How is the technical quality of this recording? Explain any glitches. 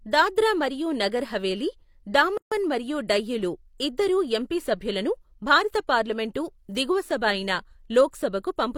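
The recording has one clear glitch: a gap at a join of encoded pieces, from 2.37 to 2.52 s. The speech appears to have been encoded in separate segments and spliced without trimming, so each segment's encoder start-up delay and final-frame padding both remain as silence at the seam. The result is a dropout of about 142 ms cutting into continuous speech, with edges smeared by the codec, after which the speech resumes exactly where it stopped.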